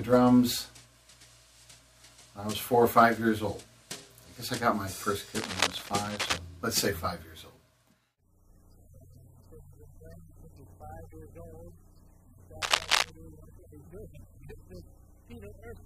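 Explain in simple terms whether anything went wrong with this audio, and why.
Yes. Two bursts of cable scratch noise cut in, from 5.31 to 6.38 s and from 12.62 to 13.10 s. They sound like scratching or rustling. The second is as loud as the sound itself. A worn cable or connector being moved is the likely cause.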